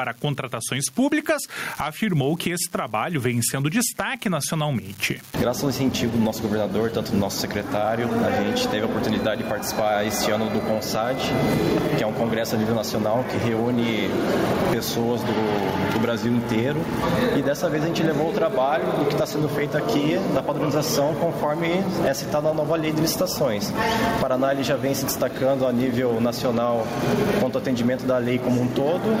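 An unreliable data bit runs throughout: one marginal data line flips at random, adding equal-sized spikes heard as a steady crackle that persists in pauses. Gain pumping also runs throughout: the gain ducks by around 10 dB under loud sounds, likely from excessive gain feeding a fast limiter.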